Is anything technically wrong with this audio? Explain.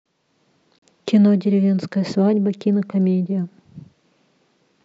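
Yes. At 0.79 to 0.82 s the speech has a gap at a join of encoded pieces: a silence of about 37 ms with smeared edges. Separately encoded segments were joined untrimmed, leaving encoder start delay and last-frame padding, after which the speech resumes where it stopped.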